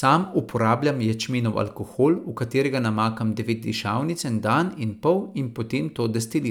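No technical faults can be heard anywhere in the recording.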